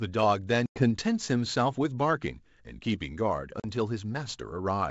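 At 0.66 to 0.78 s, then 3.60 to 3.66 s, there's packet loss on the ADPCM call: 100 ms and then 40 ms cut to hard silence. Afterwards the decoder's predictor and step size are out of step with the sender's, so the speech snaps back with brief, slight distortion.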